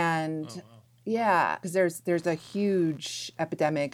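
From about 2.13 s, right after "yeah because there's", computer activity noise comes in and runs to the end: a buzzy, chirping pulse around 70 Hz, roughly 35 dB under the speech. Processor or graphics load is shifting the shared ground, so it tracks the machine, not the talker.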